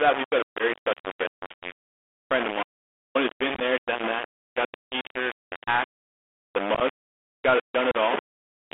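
Throughout, the speech sounds coarse and grainy, with a distortion that rises and falls with the speech and sits almost level with it. It is most likely low bit depth without dither: rounding to about three bits leaves the error locked to the signal. On a waveform the trace steps between a handful of flat levels.

On top of that is the Bluetooth CVSD headset codec. Its one-bit up/down stream, consistent with a 64 kbps link, leaves a scratchy, granular hiss, roughens sibilants and smears loud high passages. A spectrogram shows energy only between about 250 Hz and 3.5 kHz, with a hard ceiling above.

At 0.58 s, between "we've got a" and "special guest this week", there is a 15 ms hole from unconcealed Bluetooth headset packet loss. Missing headset packets were replaced by silence rather than patched, so the gap has abrupt edges. It appears as a thin vertical blank slice in the spectrogram.

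From 2.63 to 3.15 s, after "week a friend of" and before "who's been", the audio drops out to silence for about 520 ms. The waveform is a flat line with no room tone, and the spectrogram shows a clean black band. The likely cause is a lost input with silence written in its place.

More unconcealed packet losses follow. From 3.55 to 3.62 s, between "who's been" and "done that got the", 37.5 ms is lost in pieces scattered over 60 ms, with the longest run 22.5 ms. From 6.75 to 6.82 s, 30 ms is lost over 60 ms, with runs of up to 15 ms. At 7.91 to 7.95 s, about 30 ms is lost. The two scattered ones sound like a brief chopped crackle, and each shows as narrow vertical gaps.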